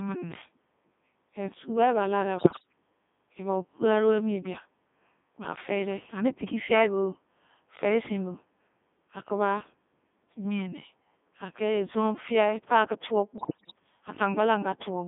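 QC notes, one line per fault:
Throughout: Codec 2 vocoder. The speech is robotic and buzzy for the whole clip. The decoder rebuilds each frame from sine waves using only pitch, voicing, energy and a spectral envelope. The original waveform is gone, so natural texture is lost and the damage is heavy. The sound sits between 200 Hz and 3.6 kHz. The quality fits Codec 2 at its top rate of 3.2 kbit/s.
2.38 to 2.67 s and 13.38 to 13.73 s: bit errors on digital voice radio. Both bursts break into warbles, bleeps and garbled robotic sound. Pitch, level and tone colour jump from frame to frame. In a vocoder this lean, each bit sets a whole frame's parameters, so a flipped bit distorts an entire frame. The first burst suggests roughly 7 percent of bits flipped. The second is worse, near 10 percent.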